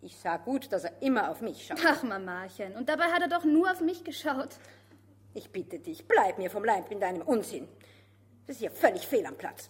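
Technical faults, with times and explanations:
No technical faults can be heard anywhere in this recording.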